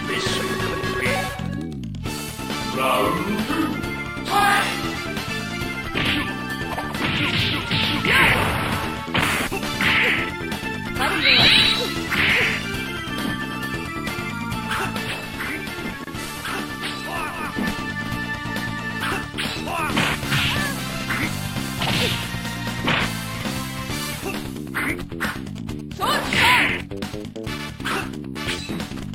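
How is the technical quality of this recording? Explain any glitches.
The recording has three distinct interference problems, each confined to a short stretch.

From 2.23 to 3.56 s a hard, raspy buzz sits about 20 dB below the audio, rich in harmonics and unrelated to the material. This is GSM phone buzz: a 2G handset on an active call nearby transmits in 217 Hz bursts that the audio circuitry rectifies.

From 14.98 to 17.58 s hiss rises to some 25 dB below the audio and the level drops about 4 dB, with 348 ms cross-fades at each end. That is digital radio blending to analogue: the receiver lost its digital stream and faded over to the station's FM broadcast, then back.

From 25.23 to 28.16 s a galloping dit-dit-dit pattern of brief 217 Hz buzzes appears, roughly 20 dB down. These are GSM signalling bursts, short groups of transmissions from a nearby phone exchanging network messages rather than carrying a call, rectified by the same circuitry.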